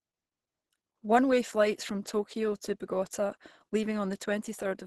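Heavy Opus compression at a very low rate is the likely cause of the damage running through the whole of this speech clip. The encoder appears to have dropped into its hybrid speech mode, with a character that fits a bitrate around 12 kbps. The band is cut off sharply, leaving nothing above about 12.1 kHz, and the speech comes out muffled and hoarse, with a grainy, rough texture where the coder has filled bands it could not afford to code.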